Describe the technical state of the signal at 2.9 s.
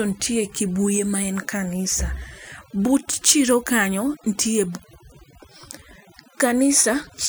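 At 2.9 s the speech is affected by overdone noise removal, which runs through the whole clip rather than starting or stopping there. A noise reduction stage set far too hard is pulling individual frequency bands down or out whenever they sit near its noise estimate, taking the quieter parts of the voice with them. The background in the pauses drops and breaks up into twinkling specks. On a spectrogram this shows as a dark, patchy background scattered with isolated bright dots, and ragged, gappy edges around the voice's harmonics.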